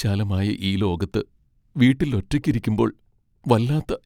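No technical faults can be heard anywhere in the speech.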